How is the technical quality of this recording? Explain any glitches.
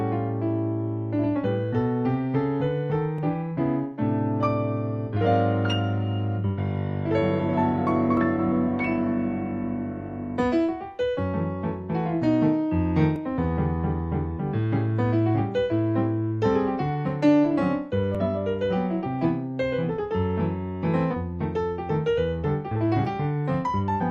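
The recording has two kinds of glitch: a regular series of tiny skips and one brief corrupted burst near the end.

Short skips land at 3.18, 8.17, 13.16, 18.15 and 23.05 s, each dropping about 10 ms of sound. This is audio missing between chunks, likely from 5-second processing blocks losing a sliver at each handover.

From 21.10 to 21.15 s, a 50 ms blip or chirp interrupts the sound. This is damaged data in a compressed stream: the decoder misreads corrupted frames and resyncs at the next header.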